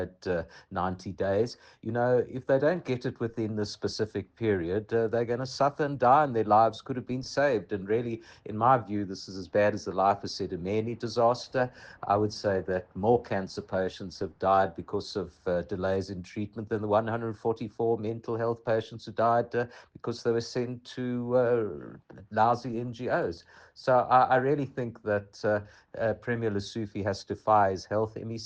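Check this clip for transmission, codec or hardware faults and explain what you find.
No faults can be heard anywhere in the clip. There is nothing to time or explain, as the audio never breaks, stalls or changes character.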